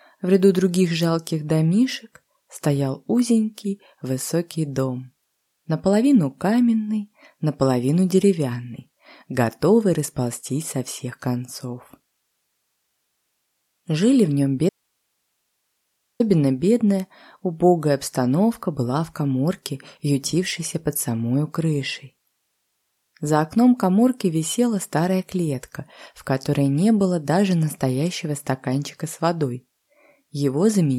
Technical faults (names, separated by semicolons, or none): audio dropout to a faint residue